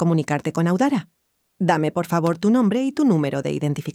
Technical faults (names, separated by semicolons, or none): loose connector crackle